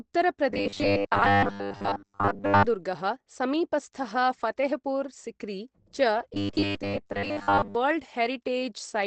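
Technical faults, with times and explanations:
Throughout: Opus compression. The sound is muffled and hoarse, with nothing above about 8.3 kHz. That's typical of Opus likely dropping into its SILK speech mode at a low rate, around 16 kbps, so the damage is plainly audible.
0.50–2.65 s and 6.34–7.75 s: robotic sound from repeated short buffers. The speech turns into a rigid metallic buzz at 100 Hz, which fits a 10 ms chunk likely being replayed over and over while most of the real audio gets skipped.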